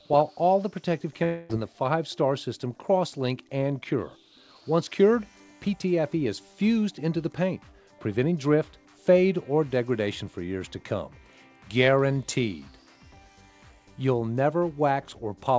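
From 1.24 to 1.51 s the stream of incoming audio likely stopped in a long network dropout, leaving about a quarter of a second of sound that never reached the receiver. The receiver bridged the hole by stretching the last sound it had into a buzzy, hiss-like continuation that fades over the gap rather than dropping to silence. Playback then resumes further on with that part missing, still band-limited to nothing above 8 kHz by the G.722 call path.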